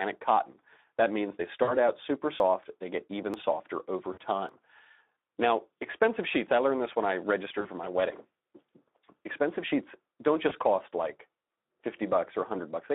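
Throughout, the Speex codec's low-rate CELP coding makes the speech hoarse and noisy. The line is held to roughly 250 Hz to 3.7 kHz, which fits a setting near 11 kbps. Unlike isolated glitches, this coloration never lets up.

At 1.63 to 1.74 s, 4.13 to 4.19 s, 7.61 to 7.69 s and 10.49 to 10.56 s, VoIP packet loss concealed by the speech codec covers gaps of 40, 40, 40 and 20 ms. The decoder keeps repeating its last pitch and filter at falling gain. Each gap is smeared into a fading tone or coloured noise, and the voice stays weak briefly afterwards.

At 2.40 s, 3.34 s and 4.49 s there is an abrupt forward jump, dropping about 30, 10 and 20 ms of sound, likely a dropped buffer (overrun). Unlike concealment, nothing is filled in: the audio simply skips.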